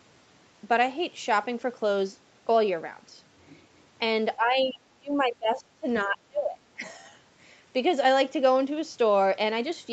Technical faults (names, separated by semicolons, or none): speech suppressed in double talk